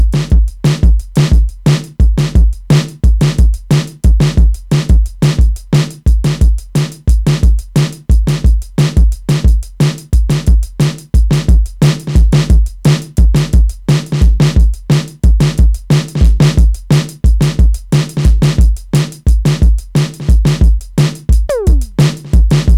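A harsh, gritty fuzz rides on the louder moments of the music from start to finish, with the peaks sounding flattened and crackly rather than clean. This is hard clipping. The signal was driven about 7 dB beyond what some stage in the chain could pass, so the tops of the waveform were sliced off flat on something like 7 percent of samples. Those squared-off peaks add spurious high harmonics, which is where the fizz comes from.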